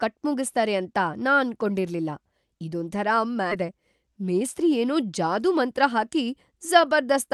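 Skip ahead, 3.51 to 3.53 s: speech jumps forward with no gap, as if the jitter buffer dropped about 0.7 s of audio while later packets were already queued. The two sides of the cut butt together, so a chunk of speech is missing and the join sounds abrupt.

Jitter buffer speed-up, 3.61 to 4.63 s: after that jump the buffer was still holding more audio than its target, so the receiver trimmed many small pitch-period slices, roughly 50 ms in all. Speech runs about 5% faster at unchanged pitch and sounds slightly hurried.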